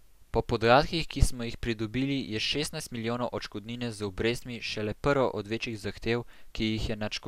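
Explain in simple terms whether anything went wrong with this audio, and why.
Nothing went wrong with this speech recording. No technical faults can be heard at any point in it.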